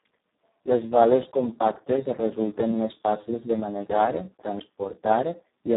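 Speex codec damage runs through the whole clip. The speech is confined to roughly 150 Hz to 3.7 kHz, with nothing above 3.8 kHz, and the starved excitation leaves it hoarse, noisy and near-robotic. This fits a very low setting around 4 kbps.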